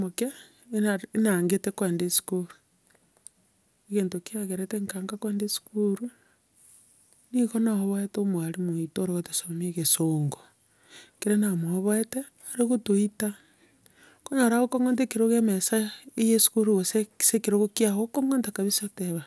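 Nothing goes wrong anywhere in this bit of speech, so there aren't any technical faults to point out.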